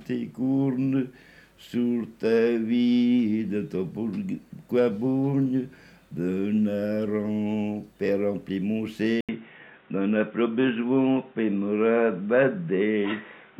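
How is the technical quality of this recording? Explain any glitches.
The recording has one fault. At 9.21 s the sound drops out for 80 ms, then returns band-limited to 3.8 kHz, dull and boxy, with a faint new noise floor well below the signal and little level change. This likely marks an input switched to a poorer device.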